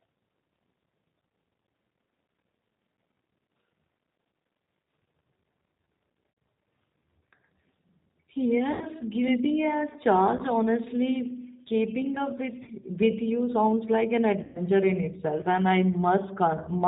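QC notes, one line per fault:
Throughout: G.729 codec. Speech is band-limited with nothing above 4 kHz, and plainly rough and synthetic. At 8 kbit/s each 10 ms frame is rebuilt from a vocal tract filter, pitch predictor and a few pulses, so fine detail is lost.
6.31–6.37 s, 8.73–8.88 s, 10.37–10.41 s (after "guilty as"), 12.63–12.71 s (between "keeping up" and "with you sounds like"), 14.43–14.63 s (between "you sounds like an" and "in itself and I"): VoIP packet loss concealed by the speech codec. Gaps of about 20 to 120 ms, which fits runs of one to six lost 20 ms packets. The decoder extends the last pitch and filter at falling gain, giving a buzzy or noisy, fading smear, and recovery stays weak briefly after packets return.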